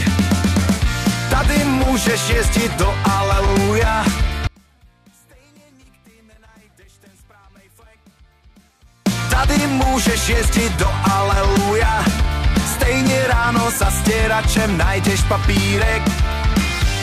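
From 4.47 s to 9.06 s the sound collapses by about 32 dB, leaving only a faint residue, the sign of one channel inverted, likely because one stereo channel had its polarity flipped before the signal was summed to mono. Everything common to both sides cancels, so centred material almost disappears while the small left-right differences survive. Unlike a dropout or mute, the audio never goes fully silent, and the faint leftover copy continues throughout.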